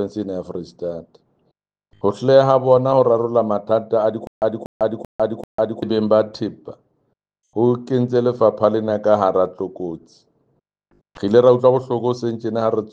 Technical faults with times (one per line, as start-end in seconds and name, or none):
4.27-5.82 stutter with silent gaps